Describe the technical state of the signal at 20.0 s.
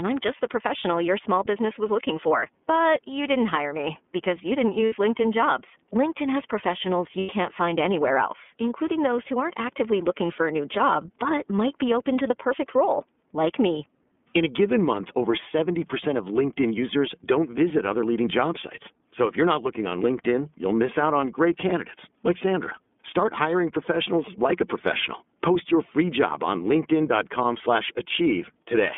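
At 20.0 s, as across the whole speech clip, the iLBC codec is at work. Each 30 ms block is coded independently and squeezed into a 200 Hz to 3.5 kHz band, consistent with the 13.33 kbps mode, leaving speech muffled, slightly rough and plainly synthetic.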